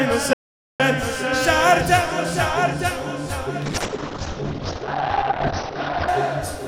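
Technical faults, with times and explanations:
0.33–0.80 s, audio dropout to silence: the sound cuts off abruptly and about 0.46 s is replaced by silence, with no background noise underneath, before resuming mid-flow. This likely comes from a momentary loss of the input signal while writing continued.
3.66–6.14 s, call bitrate drop: the encoder's rate falls from 128 kbps to about 10 kbps, staying at its lowest for roughly 2.4 s. Coarser coding makes the sound rough and watery, and the audio bandwidth narrows from 20 kHz to 6 kHz, muffling it.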